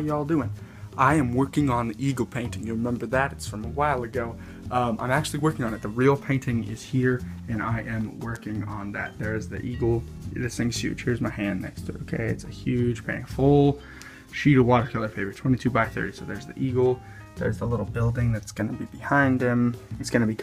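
No technical faults can be heard anywhere in the recording; the signal stays continuous and steady throughout.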